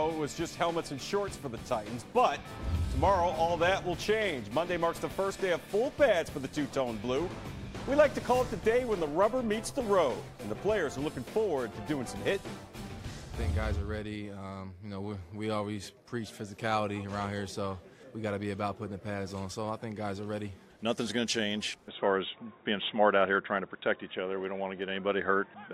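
At 21.88 s the input likely switched to a poorer device. From there the sound turns dull and boxy, with nothing above 3.8 kHz and no gap.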